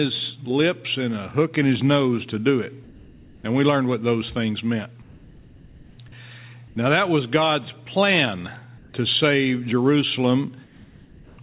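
Comfort noise in place of the background at 2.84–3.44, 5.02–5.98, 6.68–6.76, 8.78–8.94 and 10.64–11.38 s: during the pauses the real background gives way to a flat, featureless hiss about 4 to 6 dB quieter, likely because the sender stopped transmitting and the receiver synthesised noise until sound resumed. Like everything else, it is band-limited to 4 kHz.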